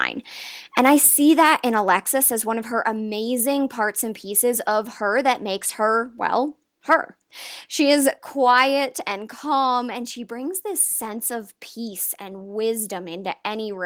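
A short burst of harsh crackle in the speech at 6.92 to 6.94 s, just after "that makes her well", is microphone overload. The loudest peak pushes about 2 dB past the converter's ceiling, so its tops are sheared flat across a few percent of the samples there. The likely cause is an input volume set too high. Unlike codec distortion, the grit is confined to that single loud peak, not smeared across quieter passages. At 8.16 s the level falls abruptly by 3 dB, a microphone volume stepped down event. The drop happens in one instant rather than easing down as a gradual level ride would, and the background falls along with the voice, which shows the input volume itself moved. Coming just over a second after the clipped peak, it was likely the call software cutting the device's input volume in response to that overload.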